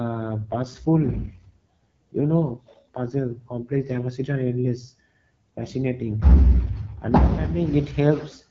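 From 0.34 to 4.05 s, just before "and endless fascinating", and again from 6.21 to 7.74 s, right after "and endless fascinating", the speech turns rougher and more synthetic with no gap and no loss of bandwidth. These are AMR rate drops: the network pushed the AMR-WB codec down to a lower rate, which sounds like a step from 12.65 to 8.85 kbit/s, before the cleaner HD Voice quality returns.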